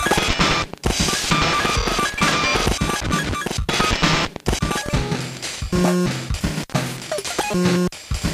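A regular click repeats about every 0.73 s from 0.42 s to 7.76 s, around ten in all, while the sound plays. These are likely clock drift buffer slips: two devices' clocks differing by roughly 0.1% let a buffer drift until around 30 samples are dropped or repeated.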